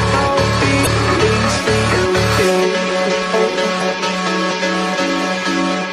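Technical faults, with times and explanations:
0.83–0.87 s and 3.78–3.82 s: damaged data in a compressed stream. Each is a brief glitch of roughly 40 ms. Corrupted bytes in the encoded stream leave the decoder unable to read those frames correctly, so it loses sync and hunts for the next valid frame header, producing a short garbled burst.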